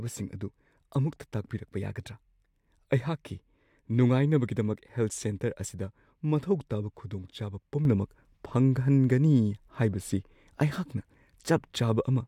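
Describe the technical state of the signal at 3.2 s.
At 3.2 s the speech signal is intact, with no audible fault at that moment.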